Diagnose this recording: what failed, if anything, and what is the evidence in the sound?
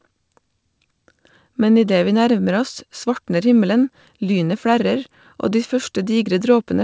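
Nothing failed: the speech comes through a call path with no content above 8 kHz, which fits G.722 at 64 kbps, and nothing in the sound points to a failure at any stage.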